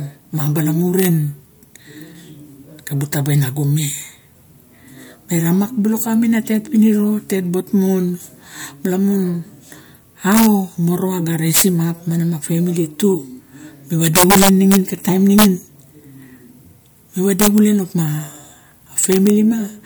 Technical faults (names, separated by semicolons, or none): integer overflow